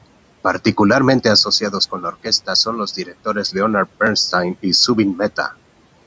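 From 1.91 to 2.26 s, just before "son los", speech is cut by the noise suppressor. It mistakes soft speech for noise and pulls it down by about 14 dB. About a tenth of a second sounds swallowed. From 2.97 to 3.27 s, after "son los", a dip of about 11 dB does the same.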